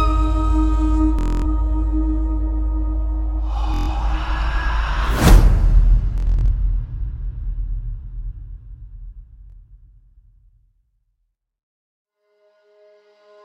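Bluetooth stutter breaks the audio four times: 1.19–1.46 s, 3.74–3.90 s, 6.18–6.51 s (scattered dropouts, longest run about 93 ms) and 9.50–9.56 s. Late or lost packets made the receiver repeat its last slice of roughly 23 ms, so each gap buzzes like a machine gun, and the sound then resumes further along. A spectrogram shows identical vertical stripes repeating; the waveform shows a short cycle copied over and over.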